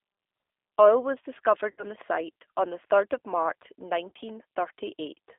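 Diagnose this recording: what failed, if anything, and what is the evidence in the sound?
Codec stage: G.729 coding throughout, band-limited to 300 Hz to 3.6 kHz. The spectrogram is empty above 3.6 kHz, and the speech sounds plainly rough and synthetic.

Network stage: VoIP packet loss concealed by the speech codec at 1.71 to 1.84 s, before "the site on", and at 4.09 to 4.12 s. The decoder extrapolates from the last frame, stretching the sound into a buzzy tone or coloured noise that fades.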